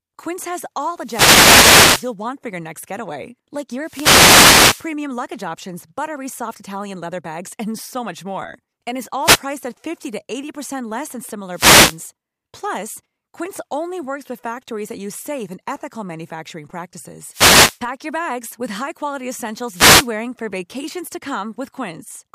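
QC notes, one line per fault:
1.01–2.13, 3.80–4.93, 9.21–9.42, 11.51–12.00, 17.30–17.80 and 19.71–20.10 s: wireless microphone noise hits. Each is a burst of static over the speech. The FM radio signal fades as reflections cancel. Receiver noise then swells until the signal recovers.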